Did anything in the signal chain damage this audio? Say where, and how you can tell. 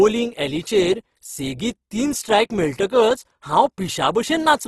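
Yes. The damage is at the codec stage and lasts the whole clip. The speech sounds rough and grainy rather than swirly, with few holes in the spectrum. Nothing is present above 12.2 kHz, a super-wideband limit. That points to likely Opus compression in its music (CELT) mode at a low rate, which fits roughly 16 kbps. Short of bits, the encoder keeps each band's energy but fills the detail with folded or noisy content. That leaves this plainly audible texture.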